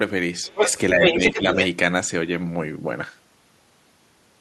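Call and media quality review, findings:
Other side's voice leaking through, 0.44–0.73 s and 1.02–1.67 s: a second voice at roughly the talker's own level. Likely residual loudspeaker echo that the echo canceller left in the microphone signal, passed on as far-end speech.

Speech suppressed in double talk, 0.94–1.21 s, overlapping the second leak: the talker dips by around 5 dB in pieces, roughly 150 ms affected. Likely the canceller, unable to separate near talker from echo, attenuating both.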